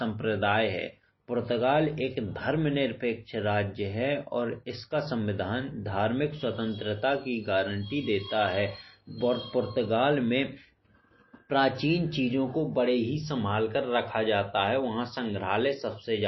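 All the way through, the speech has a hard treble ceiling near 5.8 kHz and watery, swirly smearing, likely MP3 compression at a starved bitrate, which fits roughly 24 kbps.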